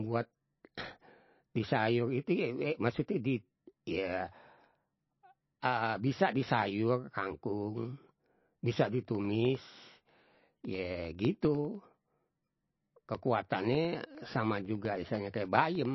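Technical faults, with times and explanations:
Throughout, MP3 compression, likely: nothing above about 5.8 kHz and a plainly watery, swirly texture, fitting a low bitrate around 24 kbps starving the encoder.
8.75 to 15.85 s, periodic USB or driver dropouts: tiny gaps of silence, around a millisecond each, every 0.1 s, giving a steady ticking under the speech.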